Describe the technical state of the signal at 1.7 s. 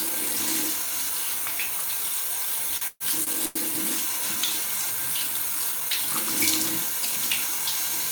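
At 1.7 s the signal is intact, with no audible technical fault at that moment.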